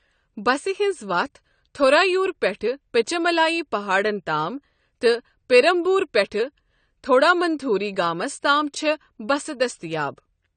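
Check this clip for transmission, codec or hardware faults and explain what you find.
One codec fault is present, running through the whole recording.

AAC compression, from start to finish: the speech has nothing above 9 kHz, and sibilants and sustained vowels carry a plainly audible fizzy, warbling smear. This likely comes from AAC-LC coding at a low bitrate, which fits a setting around 32 kbps. With so few bits available, the encoder lowers its cut-off and quantises the remaining frequency lines coarsely, leaving gaps that make the speech sound dull and unstable in texture.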